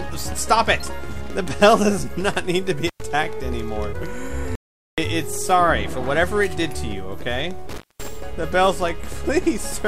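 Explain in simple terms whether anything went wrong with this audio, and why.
Two kinds of fault can be heard, one of them twice.

Intermittent contact occurs at 2.88 to 3.02 s and again at 7.69 to 8.08 s. A loose plug or cable briefly stops carrying the signal, so the sound breaks up with crackle at the edges and faint hiss while the connection is open. The first break leaves the line open for about 0.10 s and the second for about 0.22 s, so the later one is the longer gap.

An audio dropout to silence runs from 4.55 to 4.98 s. The sound cuts off completely for about 0.42 s, with no background noise at all, then resumes mid-flow. Whatever happened in that stretch is missing. The likely cause is that the recorder lost its input, through a disconnected device, a failed link or an accidental mute, and kept writing silence until the signal returned.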